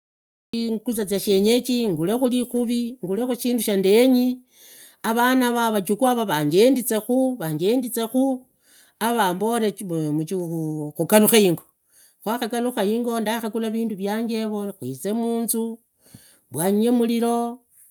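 From 0 to 0.53 s there is digital silence, then a cut-off start at 0.54 s: capture began late, so the sound enters abruptly mid-utterance with no natural attack.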